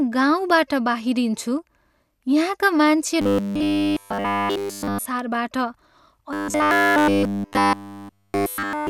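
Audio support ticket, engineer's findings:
Robotic sound from repeated short buffers, 3.22–5.06 s and 6.33–8.89 s. Speech collapses into a rigid 100 Hz metallic buzz throughout. Likely audio arriving too seldom, with about 10 ms chunks looped to fill the gaps.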